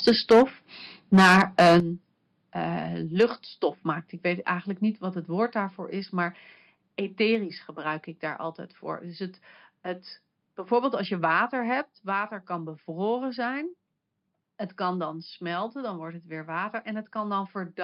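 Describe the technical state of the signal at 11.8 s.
At 11.82 s the microphone volume is stepped down, likely because the call software judged the input too hot and cut the device's capture gain in one move. Speech and room noise drop together by about 4 dB, abruptly rather than as a fade.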